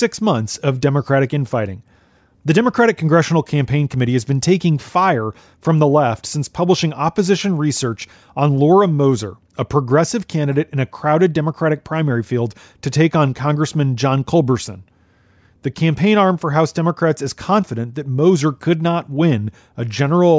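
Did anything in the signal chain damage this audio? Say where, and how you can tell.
No, nothing along the chain audibly damages this speech recording, and no stage leaves a mark that can be heard.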